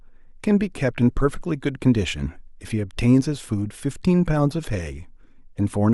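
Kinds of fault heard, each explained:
No faults can be heard.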